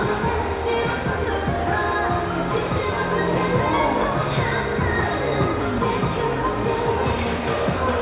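No technical faults are audible anywhere in this audio.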